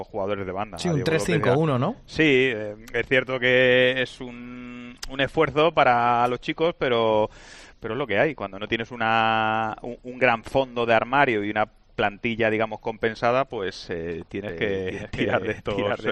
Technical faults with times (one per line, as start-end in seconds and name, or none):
14.49-16.12 doubled audio track